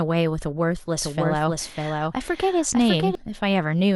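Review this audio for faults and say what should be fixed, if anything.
A doubled audio track runs from 1.01 s to 3.15 s in the speech. A second full-band copy trails the original by roughly 0.7 s, sitting about 5 dB lower, with no decay or room colouring. It enters and drops out abruptly at those boundaries. The likely cause is the same source being captured twice, once through a slower monitoring or routing path, or an edit that left two out-of-step copies stacked. Prevent it by giving each source a single active capture route and checking edits for overlapping duplicate regions.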